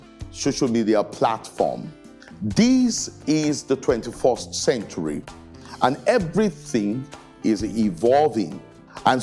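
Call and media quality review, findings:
No audible faults found.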